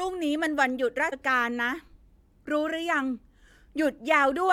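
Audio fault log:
1.12 s damaged data in a compressed stream. A brief blip, like a chirp or squawk, cuts into the speech. Bytes in the compressed data at this point are wrong. The decoder misreads that frame, loses sync, and hunts for the next valid frame header.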